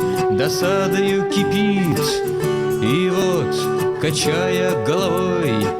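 A dropped buffer (overrun) at 1.92 s and 3.22 s, heard as a sudden jump forward with no gap. The likely cause is audio being overwritten before collection, losing around 40 ms at the first and 20 ms at the second.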